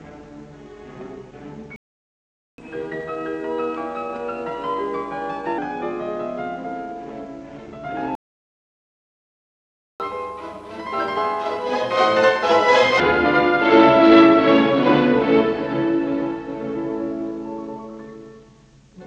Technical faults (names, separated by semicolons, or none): playback stall; catch-up at higher speed